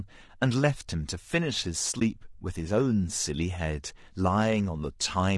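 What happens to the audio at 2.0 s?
AAC frame loss with muting occurs from 1.99 to 2.02 s. One frame of the compressed stream is missing, about 20 ms of audio, and the decoder fills the gap with silence by zeroing that frame's spectrum. The overlapping transform windows on each side fade the speech out and back in, so the result is a brief dip in the sound.

Low-delay AAC compression colours this moment too, as it does the whole clip. The speech has a plainly audible rough, grainy texture, with noise filling the spaces between pitch harmonics and a thin, somewhat synthetic top end. The likely cause is AAC-ELD at a low bitrate, which fits about 32 kbps. Its very short frames resolve harmonics coarsely and leave too few bits to code the signal cleanly.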